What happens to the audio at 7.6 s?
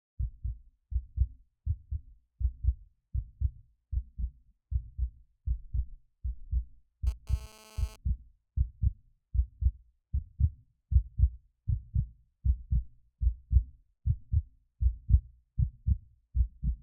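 At 7.6 s the audio carries GSM phone buzz, running from 7.07 to 7.96 s. A nearby 2G phone was sending data in bursts 216.7 times a second. The audio circuit rectified those radio pulses into sound. The result is a hard, raspy buzz at about 217 Hz, rich in harmonics and unrelated to the sound itself. It sits about 26 dB below the sound. Because the phone was moving data, the buzz comes and goes.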